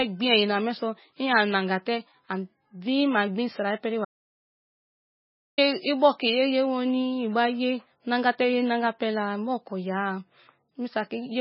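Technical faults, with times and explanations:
Throughout: MP3 compression. The speech sounds watery and swirly, with nothing above 5.5 kHz, leaving it dull and muffled. This is likely heavy MP3 encoding at a very low bitrate, around 17 kbps, where the encoder discards the treble and flickers weak frequency components on and off.
4.05 to 5.58 s: audio dropout to silence. The speech cuts out abruptly into about 1.53 s of dead silence with no room tone, then resumes mid-flow. The likely cause is a momentary loss of input while the recorder kept writing silence.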